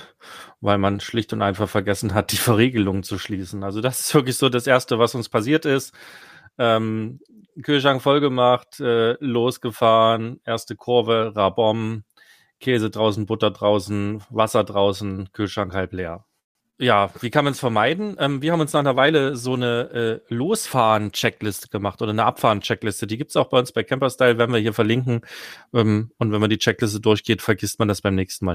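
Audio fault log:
0.88–4.79 s, call bitrate drop: the encoder fell from 64 to 26 kbps, lowest for 2.1 s, so coarser coding leaves the speech rough, watery or muffled until the rate recovers.
16.39–16.57 s, call audio freeze: the sound stalls for 157 ms, about 150 ms of it silent, then resumes where it stopped with nothing missing; likely held-up packets draining the jitter buffer.
16.63–16.66 s and 16.70–16.75 s, short concealed packet loss: 20 ms and 40 ms never arrived, and the receiver extended the preceding sound, 8 ms and 31 ms of fill, heard as brief smears.
17.11–24.07 s, call bitrate drop: the rate fell from 64 to 23 kbps, lowest for 5.07 s, making the speech rough, watery or muffled before clearing.
18.42–20.41 s, jitter buffer speed-up: the receiver trimmed about 150 ms in short pitch-period pieces to shed delay, so speech runs at 108% speed and sounds hurried at unchanged pitch.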